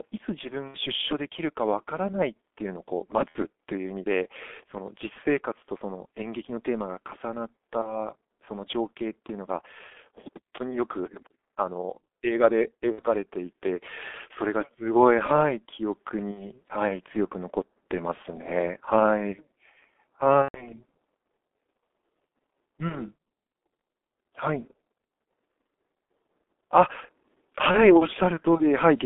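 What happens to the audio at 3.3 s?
From 3.29 to 3.38 s, VoIP packet loss is concealed by the speech codec. About 60 ms of audio is missing, which fits two lost 30 ms frames. The decoder keeps repeating its last pitch and filter at falling gain. The gap becomes a fading buzzy tone or coloured noise, and the sound stays weak briefly afterwards.

Under this, the G.723.1 codec degrades the whole passage heavily. Its band runs only from 250 Hz to 3.5 kHz, and its slow model updates fit a 6.3 kbit/s coder. The speech sounds muffled and hoarse, with blurred consonants.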